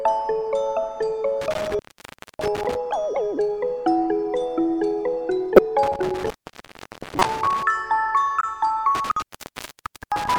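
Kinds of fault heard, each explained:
Intermittent contact: three cut-outs of 0.6 to 0.9 s, crackling at each edge with faint hiss between, from a loose plug or cable opening briefly.
Corrupt frame decoded: three brief glitches of about 30 to 60 ms, as the decoder played a few bit-damaged compressed frames anyway.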